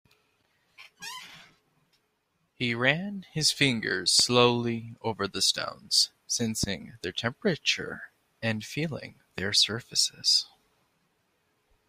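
A speech recording with three loud pops, at 4.20–4.22 s, 6.64–6.66 s and 9.38–9.41 s, each a single sharp burst about 10 dB above the speech, which carries on unbroken beneath it. A likely electrical transient, not a dropout, since nothing is missing.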